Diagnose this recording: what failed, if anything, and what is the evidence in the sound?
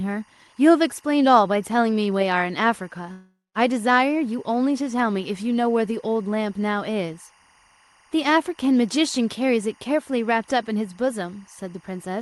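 Timecode bleed runs through the whole recording, and its source is the analogue wiring. A chirping warble sits about 35 dB below the speech. It alternates between tones near 1 and 2 kHz, and its rhythm fits 23.976 fps code. This comes from linear timecode leaking in from an adjacent cable or track. It differs from mains hum or a single-tone whine because it switches between two pitches and keeps a steady data-like cadence regardless of what is said.

A long network dropout affects the stretch from 3.11 to 3.57 s. Roughly 440 ms of audio is missing. The receiver extends the last sound as a fading buzz for most of that gap, leaving about 190 ms of near-silence, and the speech resumes without the lost portion. The likely cause is packets that never reached the jitter buffer. A natural pause would contain no synthetic buzz, and a hard edit would not show the concealment fade-out.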